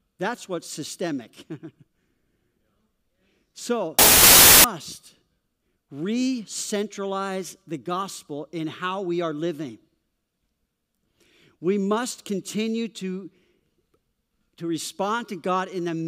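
From 3.99 to 4.64 s, the speech drowns in loud noise, running 1.33 times fast and pitched up. This is a wrong sample width: packed 24-bit samples read as 32-bit, mixing bytes across samples. A byte-order swap would not change speed.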